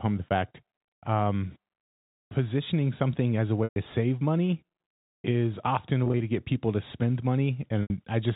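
A held, buzzy tone that fades toward silence breaks in at 3.64–3.76 s, after "positioning something as a", again at 7.82–7.90 s, and as brief flutters across 6.04–6.20 s. This is packet loss with pitch repetition: the receiver loops the last pitch period to cover missing audio, for 120 ms, 80 ms, and scattered 20 ms gaps.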